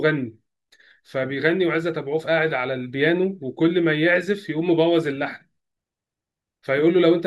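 A speech recording with nothing technically wrong in it, so there are no times or causes to give.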